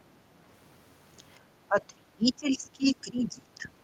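Speech suppressed in double talk runs from 1.68 to 3.75 s, with the speech ducking by up to roughly 25 dB. The likely cause is an echo canceller that, facing simultaneous talk, mistook this talker for loudspeaker echo and attenuated it.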